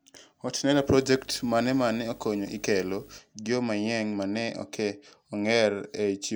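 From 0.73 to 3.18 s, video or display buzz rides under the speech, ending just before "gio manyien mane ok". A display circuit couples in a 50 Hz field-rate buzz with hash above it, roughly 25 dB down, plus a 15.6 kHz line whine. A spectrogram shows stacked 50 Hz harmonics and a thin line at 15.6 kHz.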